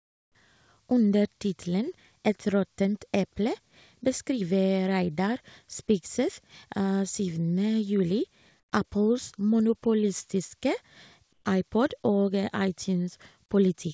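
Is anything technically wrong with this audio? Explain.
Yes. Comfort noise replaces the background at 0.0 to 0.35 s, 8.60 to 8.72 s and 11.33 to 11.45 s, likely from discontinuous transmission. The natural room sound becomes a flat synthetic hiss, about 23, 12 and 6 dB quieter. On a spectrogram it shows as smooth, featureless bands, and on a waveform as abrupt level dips. Nothing appears above 8 kHz, which fits a G.722 call path.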